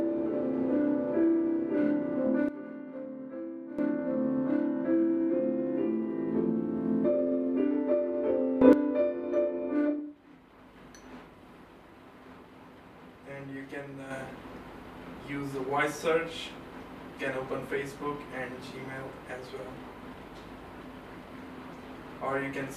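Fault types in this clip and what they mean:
Sudden gain jump: the level changes instantly rather than ramping, which likely comes from a digital gain setting or bit shift applied between two adjacent samples. Sound and background noise step together. Here the level drops by about 12 dB from 2.49 to 3.79 s, rises by about 12 dB in a brief burst from 8.62 to 8.73 s, and steps up by about 6 dB at 14.11 s, staying there to the end.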